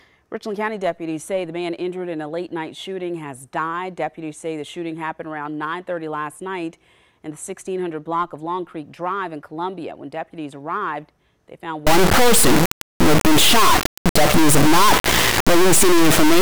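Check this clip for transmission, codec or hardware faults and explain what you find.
One fault is present: from 11.87 s to the end, the sound turns into integer read as float. The bit patterns behave as if 32-bit integer samples were interpreted as 32-bit floats, so each value lands either near zero or hugely beyond full scale. The output slams between silence and the clipping limit, giving a harsh, very loud buzzing square wave that drops out in quiet moments. Ordinary clipping still follows the original waveform's shape. This does not.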